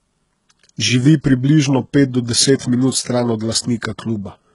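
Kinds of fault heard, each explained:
HE-AAC compression: Heavy damage throughout. S sounds come out gritty and lispy, and a metallic sheen sits over the upper range. This is likely HE-AAC at a very low bitrate, around 12 kbps. The treble is rebuilt by copying lower bands upward rather than coded, so its harmonics misalign. On a spectrogram the top region shows blocky, repeated copies of lower bands, and all content stops sharply at 11.1 kHz.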